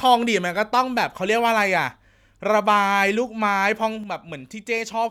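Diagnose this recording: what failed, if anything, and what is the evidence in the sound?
At 4.04 s the speech falls abruptly by about 6 dB until the end: one channel drops out, likely broken analogue wiring before mono summing.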